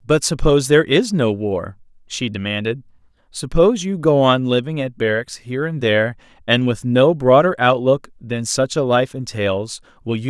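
No technical faults can be heard anywhere in the speech, so there is nothing to describe in time order.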